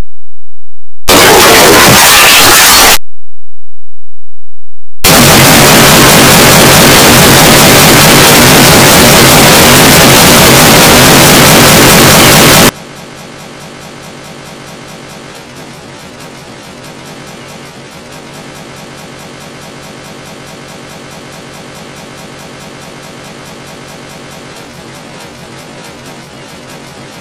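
From the start to 12.69 s the audio is brutally loud, harsh distortion, with quiet stretches blaring as hard as everything else. That points to signed and unsigned mixed up, likely 16-bit samples read with the top bit flipped, so every zero crossing leaps across full scale.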